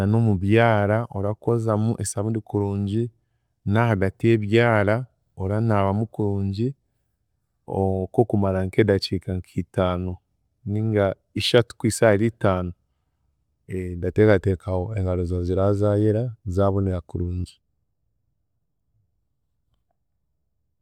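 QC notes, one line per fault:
1.49 s, dropped samples: a single sharp click just before "esaabundi kurungi". It's likely that a handful of samples went missing, so the waveform jumps straight to a later value. That's far too brief to remove any sound, so you only hear the tick.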